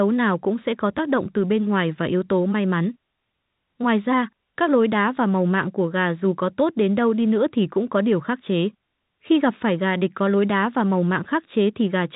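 No technical faults can be heard in this speech recording. It carries the narrow band of G.711 telephone coding, with nothing above about 3.8 kHz and at most a faint quantisation hiss riding on the speech level.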